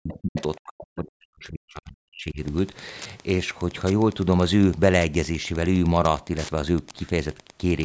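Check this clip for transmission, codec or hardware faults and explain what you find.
The recording has three faults: interference running throughout, and two call-processing faults in the first 2.4 seconds.

Wi-Fi interference runs the whole length. It is a steady ticking every 102.4 ms, about ten times a second, roughly 25 dB below the speech. The clock-regular ticks, rather than a continuous tone, set it apart from mains hum.

Speech suppressed in double talk occurs from 0 to 0.37 s and again from 0.56 to 2.4 s. The talker drops sharply, as much as 40 dB, most likely because the echo canceller ducked everything while both sides spoke. The level is pulled down, not lost in packet-style gaps.

The other side's voice leaking through appears briefly from 0.37 to 0.42 s. It is a faint second voice about 20 dB below the talker, likely residual echo the canceller missed, rather than distortion of the talker's own speech.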